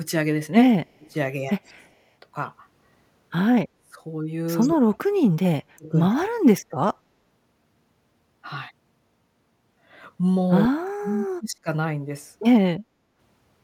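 From 0.97 to 1.93 s the speech sinks by up to about 25 dB in patches, then at 3.73 to 3.99 s, 4.69 to 6.4 s and 10.68 to 11.68 s it dips by up to about 40 dB or cuts out in pieces. This is likely speech suppressed in double talk, where the echo canceller cannot separate the near talker from the loudspeaker echo while both sides speak, and turns everything down.

At 1.64 to 1.7 s and 4.6 to 4.7 s, faint delayed scraps trail the speech by 135 ms, about 35 dB and about 20 dB below it. The likely cause is echo leak: the far side's canceller lets some loudspeaker pickup return.

From 12.8 to 13.18 s the room sound drops by about 12 dB, then recovers. This is background gated by the echo canceller, which clamps the microphone hard while the loudspeaker plays.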